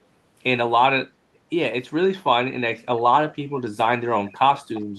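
Echo leak at 3.30, 3.58, 4.25 and 4.55–4.84 s: faint, delayed speech scraps return 348 ms late, likely residue a far-end loudspeaker's echo canceller missed.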